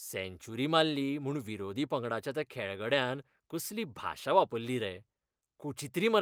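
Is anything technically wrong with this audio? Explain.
No, nothing is technically wrong.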